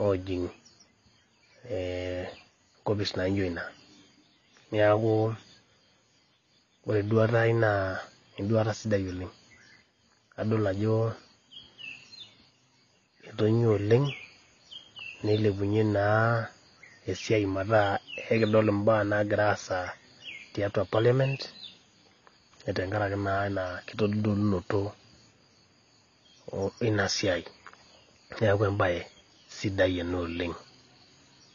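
A speech recording with clearly audible AAC compression damage from start to finish, most likely low-bitrate AAC-LC encoding of the kind a 24 kbps stream would produce. Nothing survives above about 6.9 kHz, so the sound is dull, and sustained sounds and sibilants carry a smeared, warbling, fizzy texture. On a spectrogram this shows as a hard horizontal ceiling at 6.9 kHz with patchy holes and blotchy noise-filled bands beneath it.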